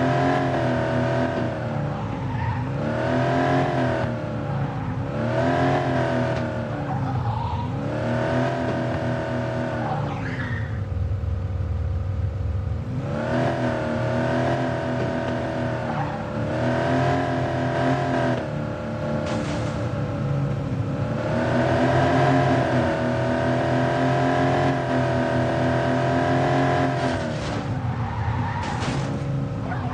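From 19.02 to 22.94 s you get a doubled audio track: a second full copy of the sound runs roughly 200 ms behind the first, at about the same loudness, so everything stutters and smears into a slapback. The copy is dry, with no decay or room colour, and it cuts in and out abruptly at those points. Likely a second, slower capture path got mixed in, or an edit left two copies out of step.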